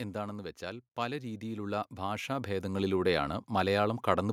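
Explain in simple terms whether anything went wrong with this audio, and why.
The recording system's automatic gain control, which sets how loud the input is captured, judged the sound too quiet and turned itself up. This is automatic gain rising. It happened gradually, from about 0.59 to 3.03 seconds, so over roughly two and a half seconds the speech steadily swells in loudness. The background noise rises right along with it, because the control boosts everything it picks up, not just the speaker.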